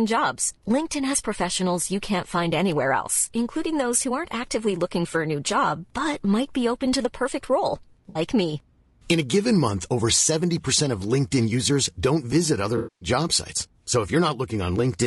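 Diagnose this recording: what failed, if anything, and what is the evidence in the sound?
The speech is rough and grainy throughout. Noise fills the gaps between harmonics and the top band sounds thin and synthetic. This points to the codec stage, likely low-delay AAC compression (AAC-ELD) at a bitrate around 32 kbps. The short frames it uses for low delay resolve pitch harmonics poorly. At this rate there are too few bits to code the spectrum cleanly, so the damage is plainly audible.

The second fault is AAC frame loss with concealment, at the network stage. Right after "to the perfect role", from 8.09 to 8.19 s, there is a brief smeared, noisy patch. That fits about three lost frames, roughly 60 ms. After "visit other", from 12.77 to 13.09 s, a longer gap of about 240 ms fades toward silence and then returns. In both places the decoder rebuilt the missing frames from the last good spectrum. 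It faded out as the loss lengthened.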